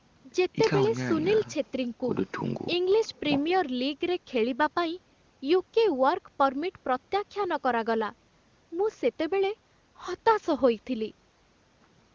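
No technical faults can be heard anywhere in this speech.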